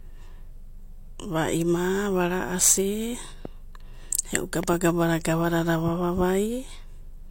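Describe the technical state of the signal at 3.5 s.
Right at 3.45 to 3.47 s there's a loud pop: a single sharp click sitting a few dB above the speech, with the talking carrying straight on underneath. It's likely a brief voltage spike from a plug, switch or static discharge, shaped by the circuitry downstream.

Under that, the whole clip, this moment included, has the layered, smeary artefacts of transcoding between lossy codecs, with nothing above 16.2 kHz. The mix of textures likely comes from a low-rate HE-AAC encode followed by an MP3 pass around 96 kbit/s, each adding its own damage.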